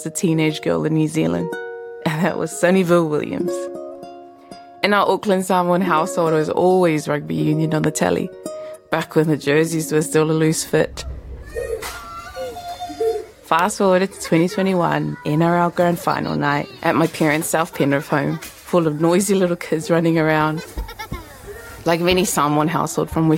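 A sharp loud pop cuts through at 7.84–7.86 s and again at 13.59–13.61 s, each standing well above the sound, which carries on underneath, likely from a brief voltage spike.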